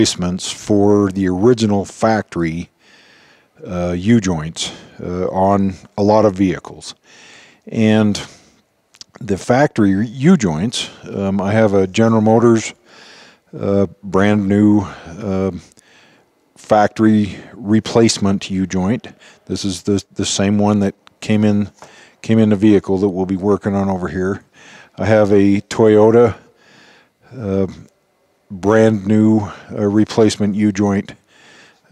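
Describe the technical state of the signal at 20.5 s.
The signal is intact at 20.5 s, with no dropout, distortion, glitch or other technical fault at that moment.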